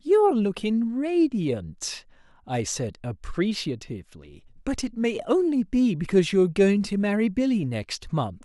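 No technical faults are audible.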